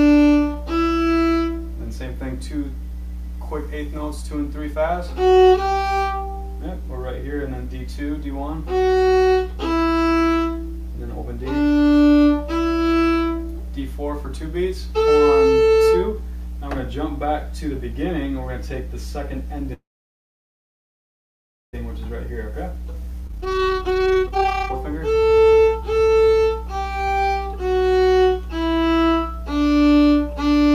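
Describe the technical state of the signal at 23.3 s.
At 23.3 s the audio is inside a jitter buffer speed-up lasting from 22.74 to 27.08 s. The receiver trims short pitch-period pieces again and again, shedding roughly one and a half seconds, so the sound runs at 135% speed without rising in pitch, unlike a resampling error.

Within that stretch, a skip ahead occurs between 23.27 and 23.31 s. Around 0.4 s of audio is dropped and the two sides are joined by a brief 18 ms fill, so playback lurches forward. Unlike a dropout, no silence or loss-concealment tail takes the missing audio's place.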